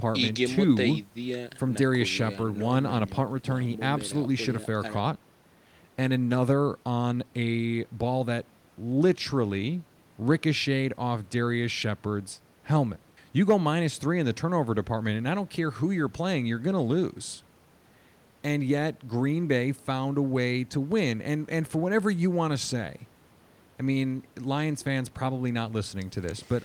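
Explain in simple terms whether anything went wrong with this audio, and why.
Nothing went wrong with this speech recording that a listener can pick out. At no point does anything in the sound suggest a problem with how it was captured or passed along.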